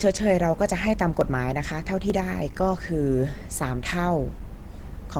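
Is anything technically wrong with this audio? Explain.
Yes. Two problems are audible in this speech clip.

Throughout, the sound is muffled and hoarse, with plainly audible codec damage. This is likely Opus compression running in its hybrid speech mode. The encoder is short of bits, which points to a low rate near 16 kbps. The bandwidth still reaches about 20 kHz.

At 1.21 s and 2.1 s there is a single sharp click. Each is likely dropped samples. Under a millisecond of the stream goes missing, so the waveform jumps abruptly. Nothing audible is lost. Only a thin vertical line crosses the spectrum.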